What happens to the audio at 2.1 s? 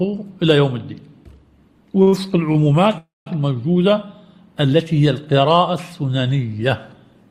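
The sound hangs from 2.02 s to about 2.27 s: whatever was playing is held and smeared out with a faint buzzy or dipped quality, then picks up exactly where it left off. These are two back-to-back short stalls from a late packet, at 2.02 to 2.08 s and 2.08 to 2.27 s. Each time, the jitter buffer ran dry and the receiver stretched the last sound, by about 47 ms and then 41 ms, until the data arrived. Nothing is lost, only delayed.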